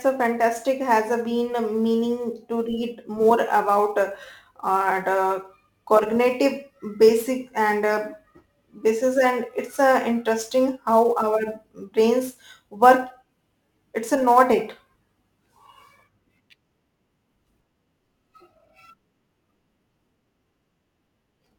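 Speech carrying sample clock jitter from start to finish: the converter's timing wanders by something like 7 microseconds, so each sample lands slightly off its ideal instant, and the error swells wherever the waveform changes fastest. It sounds like a gritty hiss riding on loud and bright syllables, sitting roughly 30 dB below the signal, and disappears in pauses. A spectrogram shows a faint noise haze tracking the energetic, high-frequency parts of speech, absent in gaps.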